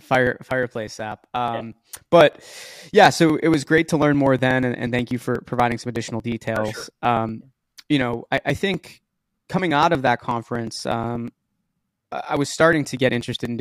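It's a speech recording with periodic USB or driver dropouts running through nearly the whole thing, from about 0.15 s to 13.45 s. Every 0.121 s, roughly eight times a second, a sliver of a few milliseconds just goes missing. The audio jumps ahead rather than going silent, so you hear a steady ticking that rides on the speech, around a hundred of them, while the voice is sounding. That regular spacing points to a background task periodically stalling the USB bus or audio driver.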